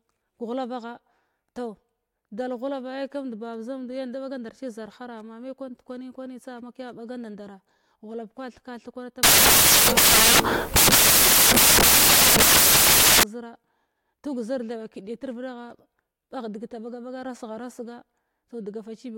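Samples built from the wrong bytes, from 9.23 to 13.23 s, just after "kwa theka thig kwana": each sample's bytes are combined in the wrong order or alignment, so the rapidly varying low bits dominate. The speech becomes loud, harsh broadband noise for four seconds, close to white on the louder sounds.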